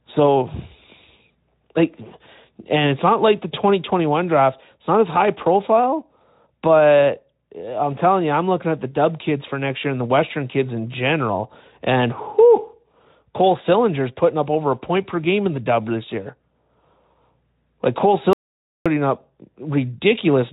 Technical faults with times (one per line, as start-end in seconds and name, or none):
18.33-18.86 audio dropout to silence